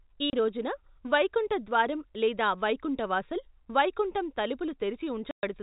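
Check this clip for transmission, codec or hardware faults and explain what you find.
One transmission fault appears twice: packet loss filled with silence. It sits on top of G.711 telephone coding, which shows in the cut-off at 4 kHz.

At 0.30–0.33 s, just before "రోజున వైకుంఠ ద్వారం లేదా", the speech drops out for 30 ms. A longer 120 ms hole follows at 5.31–5.43 s. The receiver replaced each missing packet with pure silence, so both gaps start and end abruptly. Their lengths fit one and four 30 ms packets. Concealed loss would instead smear or repeat sound to bridge the gap.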